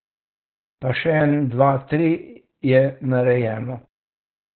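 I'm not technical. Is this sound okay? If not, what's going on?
No. For the whole clip the speech is squeezed by Opus voice compression at a very low setting. Everything above about 4.3 kHz is gone, so it sounds muffled, like an old phone line, and the voice also has a hoarse, slightly robotic grain. That grain is what sets it apart from simple muffling: a plain treble cut would sound dull but smooth, whereas here the voice itself is rebuilt roughly from very little information.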